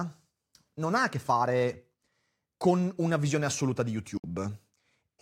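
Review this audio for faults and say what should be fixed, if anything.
Digital broadcast dropout at 4.18 to 4.24 s: the speech cuts out in a single short hole and resumes afterwards. The receiver lost the digital signal or rejected frames that failed their checksum, and it muted until valid frames arrived again. About 64 ms of speech is simply missing, which fits two lost frames. To prevent it, strengthen reception margin or add error protection and interleaving so damaged frames can be recovered.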